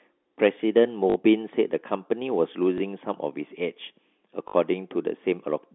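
Speech heard over a telephone-band line limited to about 250 Hz to 3.5 kHz shows packet loss with the last packet repeated at 1.10–1.16 s, 2.78–2.80 s and 4.48–4.54 s. The 60 ms gaps fit three lost 20 ms packets, and the shorter one fits a single packet. The receiver loops the previous chunk out of step with the pitch, causing a 50 Hz robotic buzz in the two 60 ms runs and a small blip at 2.78 s. On a waveform, identical repeated segments appear. On a spectrogram, the repeats show as vertical seams.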